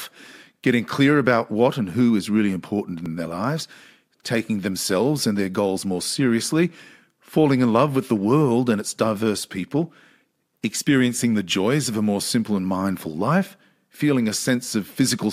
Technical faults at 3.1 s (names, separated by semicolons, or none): repeated buffer